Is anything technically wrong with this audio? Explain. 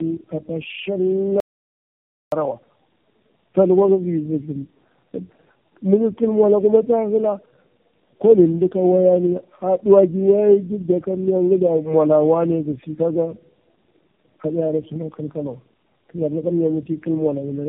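Yes. Two faults are audible in this speech.

The first runs through the whole clip: tandem speech coding. The speech passed through four speech codecs in turn, AMR-NB, G.729A, iLBC and AMR-NB again, with G.711 links between them. At each border it was decoded and then coded afresh, so every coder worked on the previous one's errors. Nothing remains above 3.7 kHz. The result sounds muffled, rough and warbly, worse than any single codec would sound.

The second is an audio dropout to silence from 1.40 to 2.32 s, lasting about 0.92 s. The likely cause is that the input was lost, through a disconnected device, a failed link or a mute, while the recorder went on writing silence. The speech cuts off abruptly, the gap is dead silence with no room tone, and it resumes mid-flow. Whatever was said in that stretch is gone.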